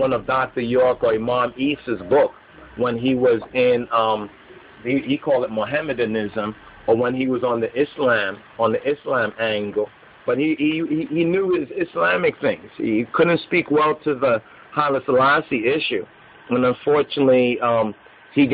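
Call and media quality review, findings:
Adaptive stream at a lower bitrate, 15.33 s to end of clip (18.53 s). Symptom: abrupt step down in quality, no gap or dropout at the switch. Codec artefacts rise for the rest of the sound. Probable component: adaptive streaming client. Mechanism: connection slowed, player switched to a lower-bitrate rendition; the change in sound points to MP3 falling from about 128 kbit/s to about 32 kbit/s.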